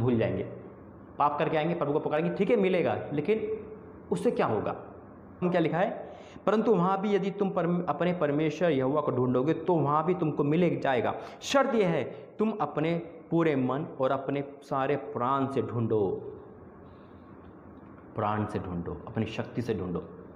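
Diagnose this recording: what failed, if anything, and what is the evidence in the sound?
At 5.41 s the sound jumps abruptly forward, with a brief blip at the join. The continuity breaks, as if part of the programme were lost. This is likely a stream segment skipped at the network or playback stage: one segment failed to load, and the player moved on to the next.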